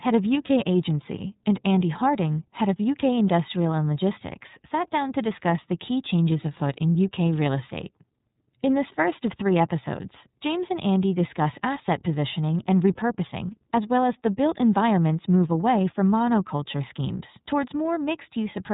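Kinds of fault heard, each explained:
iLBC codec: a narrowband voice codec coding each 30 ms frame independently; nothing above 3.8 kHz survives, leaving the speech plainly rough and synthetic throughout.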